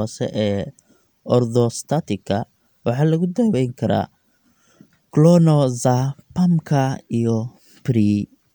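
No technical faults can be heard anywhere in this speech recording. Nothing in the audio points to a dropout, a glitch or any other problem along the way it was captured and played back.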